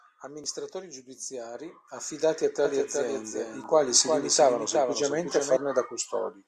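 From 2.65 to 5.57 s the speech is shadowed by a dry copy trailing roughly 0.4 s behind, somewhat quieter, starting and stopping abruptly: a doubled audio track, likely from a second, slower capture path.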